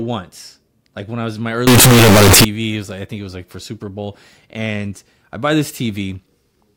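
A short speech clip in which, from 1.67 to 2.45 s, right after "I was in my", the sound turns suddenly very loud and harsh, with a near-square, buzzing waveform sitting at a nearly fixed, high level and background noise pushed up to the same level as the speech, though the pitch can still be followed. This is the float read as integer fault, likely caused by 32-bit float samples being decoded as 32-bit integers, so each sample's sign and exponent bits, rather than its true amplitude, decide the output level.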